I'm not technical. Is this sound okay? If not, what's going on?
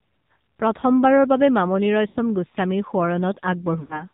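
No. The whole clip sounds muffled, thin and buzzy, as if heard over an old mobile phone. That is the AMR narrowband mobile codec: it discards everything above 4 kHz and rebuilds the voice from a simplified model, here at a low quality setting.

There are also two moments of lost AMR speech frames. At 2.08 to 2.17 s, just after "প্ৰথমবাৰৰ বাবে মামণি", and at 3.80 to 4.04 s, the sound smears and fades briefly. Chunks of about 80 ms and 100 ms went missing in transmission, so the decoder stretched what it last received until the signal returned.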